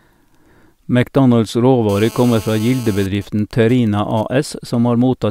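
From 1.89 to 3.07 s, GSM phone buzz: a calling phone's rectified 217 Hz bursts rasp about 19 dB down, seen as stacked spectrogram harmonics. From 3.15 to 4.23 s, GSM signalling bursts from a phone in a call whose talker is silent: faint even ticks and a longer 217 Hz buzz twice a second, forming gapped clusters on the waveform.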